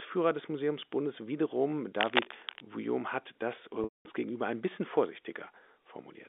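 From 1.98 to 2.67 s, just before "hat das äh", dense, uneven scratching sits over the speech at nearly its level: cable scratch noise, likely from a worn cable or connector being moved. From 3.84 to 4.05 s, after "hat das äh", a buzzy repeated pitch fades to silence before "gegenüber ein bisschen" returns. This is packet loss with pitch repetition, about 210 ms missing, which fits seven 30 ms packets.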